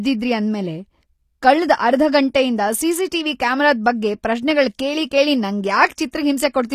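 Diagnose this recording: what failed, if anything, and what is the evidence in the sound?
S sounds turn gritty and lispy throughout under synthetic treble: likely HE-AAC compression at the codec stage, near 24 kbps, copying lower bands upward.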